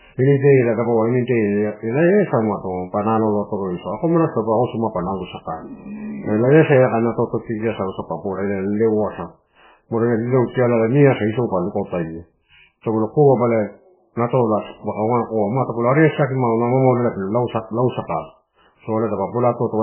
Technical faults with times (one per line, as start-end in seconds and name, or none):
0.00-19.83 MP3 compression